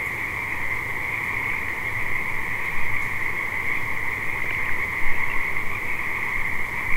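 From 1.44 to 1.77 s, and again from 4.37 to 4.70 s, DAB burbling breaks into the sound. Weak reception lets bit errors slip past error correction. Single sub-bands get short blips of noise. This points to a bit error rate well under one percent.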